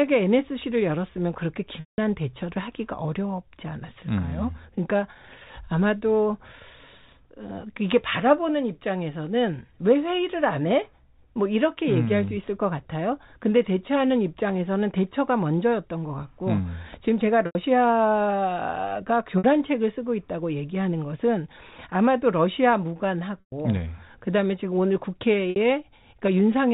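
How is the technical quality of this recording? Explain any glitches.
The recording has five short packet-loss gaps, each bridged by pitch repetition, at 1.8 s (180 ms), 17.46 s (90 ms), 19.38 s (60 ms), 23.4 s (120 ms) and 25.51 s (60 ms). The receiver repeats the last pitch period and fades it out. The shorter gaps sound like a briefly held, buzzy tone, and the 180 ms one decays toward silence before speech returns. Unlike a plain dropout, the gaps are filled with sound rather than cut to silence. The telephone-band G.711 coding stays within its normal 4 kHz limit.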